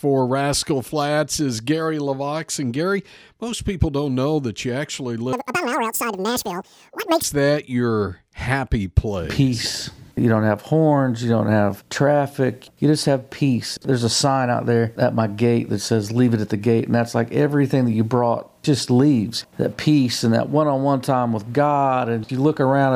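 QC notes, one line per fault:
5.33–7.24 s, audio read two samples at a time (double speed): the sound abruptly races at twice its pace and jumps a full octave, 12 semitones, higher. This points to the reader treating each pair of samples as one frame, as if expecting two channels or samples twice as wide, so only every other value plays. Playback doubles.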